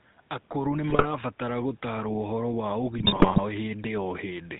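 A speech clip carrying the GSM full-rate codec throughout. Nothing above 4 kHz survives, and the voice has a plainly audible buzzy, gravelly roughness, consistent with a 13 kbps bitrate. GSM bit errors strike twice, from 0.90 to 1.04 s and from 2.98 to 3.39 s. Corrupted decoder values warp the spectrum and level, producing squawks, pops and gargling.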